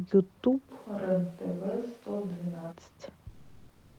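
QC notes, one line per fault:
0.71–2.71 s, switch to a distant microphone: the close mic likely dropped out, so the sound turns hollow and roomy, about 10 dB quieter, with much more room noise.
3.31–3.98 s, comfort noise in place of the background: transmission likely paused, fitting Opus DTX, so about 0.68 s of real background becomes steady, featureless noise, shifted by about 3 dB.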